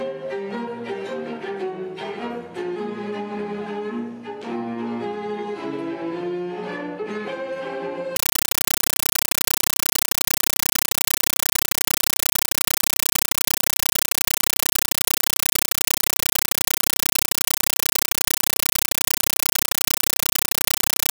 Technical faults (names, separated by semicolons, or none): compressed stream played as audio